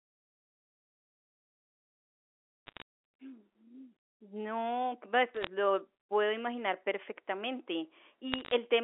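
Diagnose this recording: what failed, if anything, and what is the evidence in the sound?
Bit errors on a digital phone line, at the transmission stage. Bursts of sharp ticks and crackle sit over unchanged speech at 2.67–2.82 s, 5.34–5.47 s and 8.32–8.51 s. Flipped bits corrupt single samples. The crackle density points to a few tenths of a percent of bits hit.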